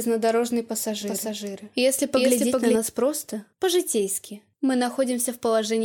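A second capture path or misaligned edit likely mixed the audio in twice from 1.01 to 2.76 s, a doubled audio track trailing around 400 ms behind at similar loudness.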